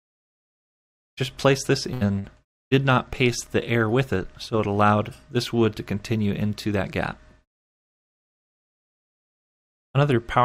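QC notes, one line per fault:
1.93–2.03 s and 2.19–2.26 s, burst of packet loss: two dropouts where the last sound gets stretched and faded, then jumps ahead, skipping about 80 ms and 60 ms.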